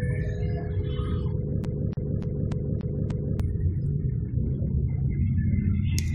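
CD stuck on one turn from 1.64 to 3.40 s: the laser keeps jumping back, replaying the same 0.29 s slice six times, each loop cut by a brief mute.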